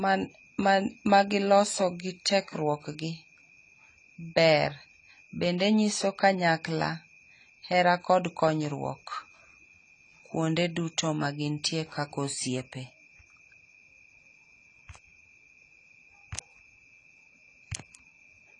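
From start to end, the speech sounds dull and smeared, with nothing above 10 kHz and a warbling fizz on sibilants, likely AAC compression at a low bitrate near 24 kbps, unlike a clean low-pass cut.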